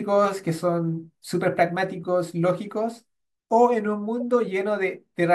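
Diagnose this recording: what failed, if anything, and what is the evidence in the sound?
The codec stage failed: a corrupt frame was decoded twice, with bit-damaged compressed data played out as if valid rather than being concealed. Misread gains and codes place energy at the wrong frequencies, heard as chirps, squeaks, blips or bursts of noise in the speech from 2.03 to 2.06 s, spanning a couple of frames, and at 4.20 s, touching a few frames. Both errors are quiet, peaking around -35 dBFS.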